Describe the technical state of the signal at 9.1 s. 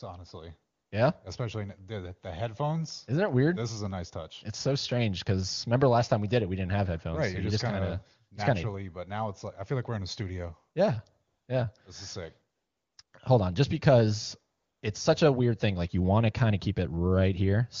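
At 9.1 s the speech is intact, with no dropout, distortion or other fault, and the AMR wideband (HD Voice) coding heard there sounds clear, as a high-rate mode would.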